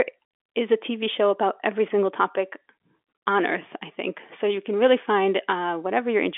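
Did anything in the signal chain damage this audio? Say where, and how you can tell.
No, nothing in the signal chain damaged this speech.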